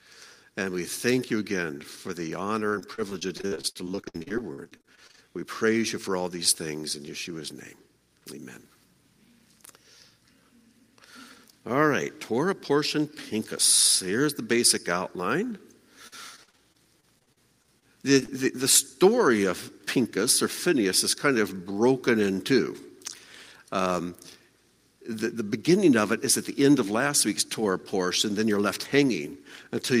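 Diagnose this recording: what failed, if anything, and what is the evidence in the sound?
The network path failed repeatedly: repeated packet loss (robotic sound) from 2.69 to 5.19 s, about thirty gaps up to 61 ms, and again from 16.07 to 17.84 s, thirteen gaps up to 45 ms. The decoder kept extending the last sound to bridge each hole, so those stretches turn choppy and robotic.

Two separate network dropouts follow closely, at 18.20–18.23 s and 18.25–18.30 s. Each is short concealed packet loss of about 20 ms, bridged by continuing the preceding sound and then blended back, heard as a brief smear or wobble.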